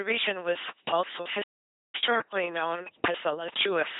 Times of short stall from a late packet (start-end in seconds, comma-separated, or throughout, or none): none